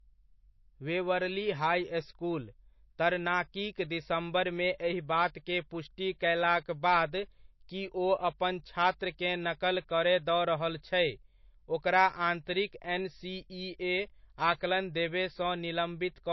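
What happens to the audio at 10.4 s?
Low-bitrate audio saved at a high bitrate affects 10.4 s, as it does the whole speech clip. Nothing is present above 5.8 kHz, so the speech sounds dull and lacks its upper sibilance and air. This is likely a low-bitrate MP3, around 28 kbit/s, that was later re-encoded as a much larger MP3, near 166 kbit/s. The second pass cannot restore the band the first encoding stripped out, and that encoding's artefacts stay in, so the dull, band-limited sound remains.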